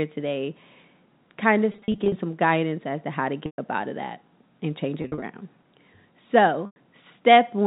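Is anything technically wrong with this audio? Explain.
Yes. Packet loss with pitch repetition occurs at 1.72–2.12 s, 3.46–3.58 s, 5.02–5.22 s and 6.66–6.76 s. The receiver fills each gap by looping the last pitch period and fading it over about 50 ms. At 1.72 s and 5.02 s the losses are scattered in runs of up to 40 ms, so they sound like brief buzzy holds. The unbroken 100–120 ms gaps at 3.46 s and 6.66 s fade toward silence before the audio cross-fades back.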